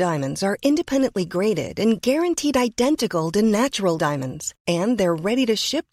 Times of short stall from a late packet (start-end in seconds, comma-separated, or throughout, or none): none